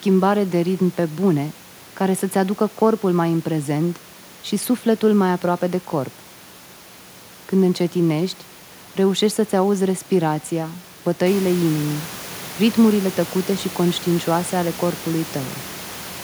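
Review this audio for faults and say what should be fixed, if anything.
Nothing needs fixing: no faults turn up in this speech, and the room noise that rises by about 10 dB around 11.5 s, staying about 18 dB below the speech, belongs to the recording itself.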